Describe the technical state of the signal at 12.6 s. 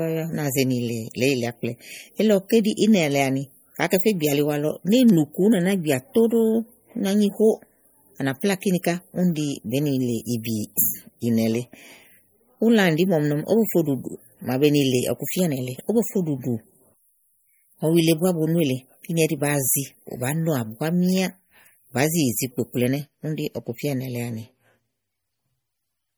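At 12.6 s the speech is still carrying the damage that runs through the whole clip, likely MP3 compression starved of bits, which fits a rate near 48 kbps. The encoder cuts the treble and lets weak frequency lines flicker between frames, so the sound turns watery and swirly, with chirpy s sounds and softened attacks.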